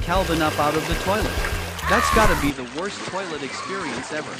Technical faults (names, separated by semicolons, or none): input switched to a poorer device